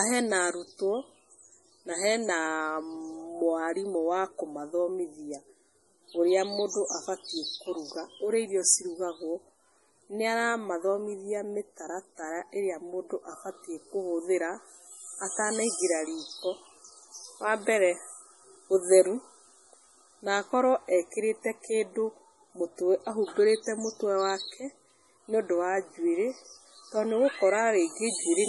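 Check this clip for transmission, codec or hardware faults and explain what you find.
One fault runs through the whole recording: heavy MP3 compression artefacts, present from start to finish. The sound points to a very low bitrate, around 32 kbps, which is likely MP3 coding. With so few bits, the encoder discards everything above 11.5 kHz and drops quieter frequency lines that flicker in and out between frames. The speech therefore sounds dull and watery, with swirling, metallic chirps on s sounds and softened, smeared consonant onsets.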